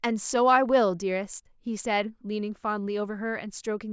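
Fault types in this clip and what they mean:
No faults detected in the speech: no dropouts, level anomalies or playback defects found across the clip.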